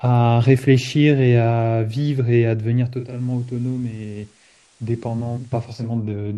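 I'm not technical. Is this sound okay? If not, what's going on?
No. From 2.79 s to 6.07 s this speech shows digital radio blending to analogue: the receiver lost its digital signal and faded over about half a second to the FM broadcast. Hiss comes up and the sound gets a little quieter.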